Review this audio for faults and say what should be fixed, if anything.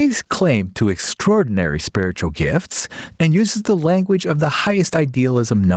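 Gain pumping runs through the whole speech clip. The level swings by around 15 dB, pulled down under each loud syllable, likely because the microphone gain is far too high and a fast limiter keeps pulling it down. On a waveform, the noise floor rises between phrases and collapses at each peak. On a spectrogram, the background band brightens in the gaps, below the 8 kHz ceiling set by the call path.

Lower the microphone input gain so the limiter seldom engages.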